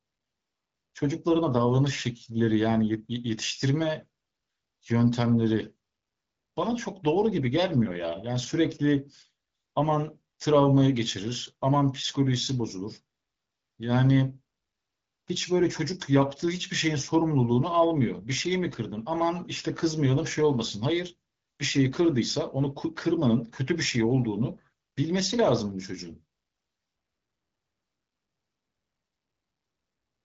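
No technical faults are audible anywhere in the recording.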